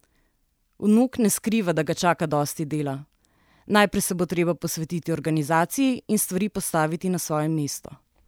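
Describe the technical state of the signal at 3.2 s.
At 3.2 s the speech signal is intact, with no dropout, clipping, glitch or other fault audible at that moment.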